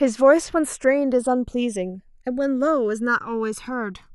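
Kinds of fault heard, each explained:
Channels drifting apart, throughout the speech: the left and right channels appear to come from two devices running on separate clocks that disagree by a couple of hundred parts per million, so the delay between them is not fixed but keeps sliding, reaching around a millisecond by the end. Summed to mono, that changing offset drags comb-filter notches slowly across the spectrum, heard as a gradual, sweeping flanging on the sound.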